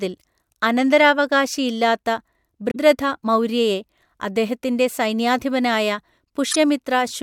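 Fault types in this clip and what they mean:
Damaged data in a compressed stream: corrupted bytes in the encoded speech make the decoder misread frames and lose sync until it finds the next valid header. It is heard as two brief disruptions, at 2.68–2.77 s just after "അനന്തരാവകാശി ഇല്ലാത്ത" and at 6.49–6.56 s.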